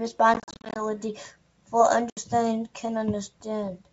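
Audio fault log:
0.34–0.81 s, packet loss on an ADPCM call: about 250 ms of audio drops out as many short silent holes spread over roughly 420 ms, the longest about 40 ms, which fits around thirty lost packets. Each hole has hard edges. When the sound returns, the decoder's predictor and step size no longer match the sender's, so it comes back slightly distorted before settling.
2.10–2.18 s, packet loss on an ADPCM call: about 70 ms of audio, roughly seven packets, is lost and filled with silence. It cuts off abruptly, and the restart is again jolted by the mismatched decoder state. The G.722 wideband coding itself stays clean up to about 7 kHz, which points to its full 64 kbit/s mode.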